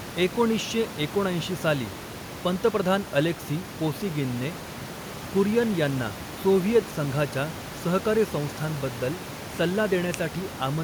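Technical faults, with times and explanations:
Nothing stood out on listening; the only background is a room noise sitting about 15 dB below the speech, which belongs to the recording space rather than the system.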